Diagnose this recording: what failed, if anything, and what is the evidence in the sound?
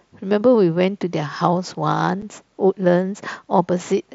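A brief, hard-edged hole punches through the speech at 2.22 s, with abrupt boundaries before the sound resumes. This is unconcealed Bluetooth headset packet loss on the wireless link between headset and phone. About 7.5 ms of audio went missing, which fits a single dropped packet on the wideband mSBC link. Nothing filled the gap with an estimate, so silence or an idle pattern stood in and the waveform was cut abruptly on both sides.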